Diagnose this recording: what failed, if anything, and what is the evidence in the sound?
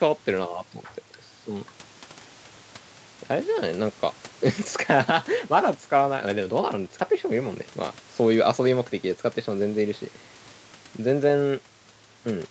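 Nothing has failed in this speech recording; the audio stops at 8 kHz and the very lowest bass is trimmed away, which is simply the call's microphone processing and codec doing their ordinary job.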